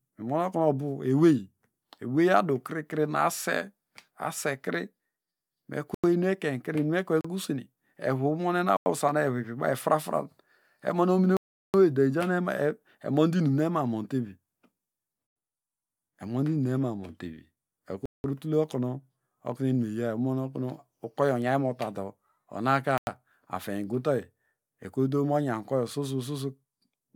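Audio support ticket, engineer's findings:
Hard cut-outs in speech. Block of digital silence at 5.94, 7.21, 8.77, 11.37, 15.27, 18.06, 22.98 s (after "okenu ukoyo onyaynmotado onaka"). Mostly 93 ms, others 36, 186, 372 ms; 93, 186, 372 ms fit 4096-sample buffer multiples. Output buffer likely not filled in time.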